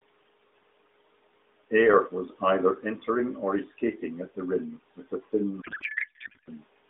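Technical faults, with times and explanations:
5.62 to 6.52 s: codec payload misread. For just under a second the speech gives way to garbled noise and warble that barely tracks it. The sound points to AMR frames packed in octet-aligned form being unpacked as bandwidth-efficient, so every field is read from the wrong bit position and the decoder synthesises nonsense from parameters that still look legal. The narrowband AMR path, limited to roughly 250 Hz to 3.7 kHz and only lightly coloured, sounds as expected outside this span.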